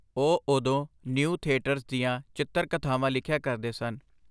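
No technical faults can be heard anywhere in this speech recording. Nothing in the sound points to a problem in how it was captured, processed or delivered.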